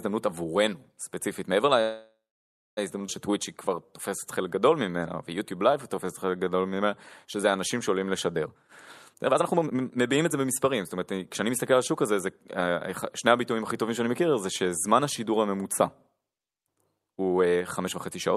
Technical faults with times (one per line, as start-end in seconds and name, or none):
1.81-2.79 call audio freeze
3.07-3.10 skip ahead
3.31-8.41 jitter buffer slow-down
8.45-12.12 jitter buffer speed-up